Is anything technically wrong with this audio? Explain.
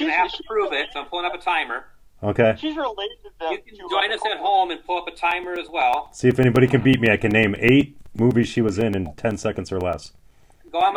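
Yes. Periodic USB or driver dropouts run from 5.18 s to 10.81 s, repeating every 0.125 s, about eight per second and around fifty in all. At each interval something stalls the USB transfer or the audio driver, so a few milliseconds of audio never arrive and are filled with silence. Those brief, evenly spaced gaps cut the waveform abruptly, producing a steady train of ticks riding on the sound.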